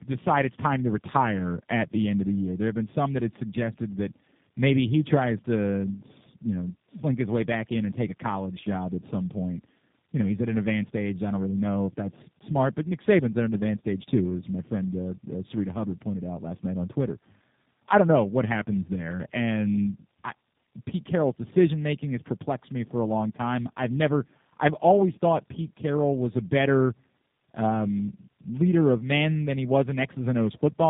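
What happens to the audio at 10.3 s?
The speech at 10.3 s carries tandem speech coding, present through the whole clip. The sound fits two low-rate speech codecs in a row, AMR-NB and then G.729A, with a G.711 link between them. Each coder re-models the previous one's errors, so the speech comes out rough, muffled and warbly. On a spectrogram, energy stops at 3.7 kHz and the harmonics look smeared and unsteady, with blurred formant tracks.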